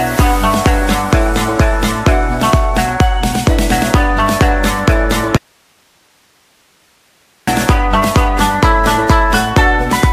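At 5.37 s the sound cuts abruptly to faint hiss, roughly 40 dB down, returning at 7.47 s. This audio dropout to a faint residue likely means a lost feed with a still-live downstream path. Its hard edges and lingering hiss distinguish it from a fade or pause.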